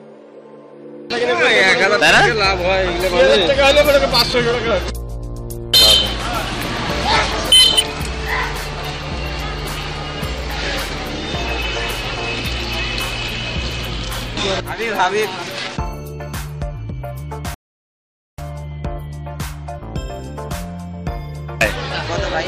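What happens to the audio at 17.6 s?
A rebuffering stall runs from 17.54 s to 18.39 s. Playback outran the downloaded audio, so the player stopped and waited for more data to arrive. The sound drops abruptly to silence for about 0.84 s, then picks up at exactly the point where it broke off. No audio is skipped or repeated. The gap simply stretches the timeline, pushing everything after it later by that same 0.84 s.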